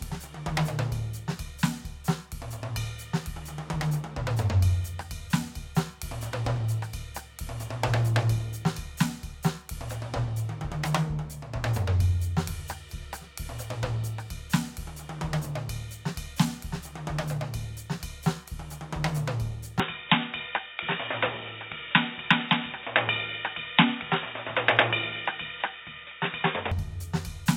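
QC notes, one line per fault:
19.80 to 26.72 s, input switched to a poorer device: the music abruptly turns dull and boxy, with nothing above 3.8 kHz, no gap at the switch, unchanged loudness and a faint new noise floor far beneath it, likely from recording moving to a narrower-band microphone.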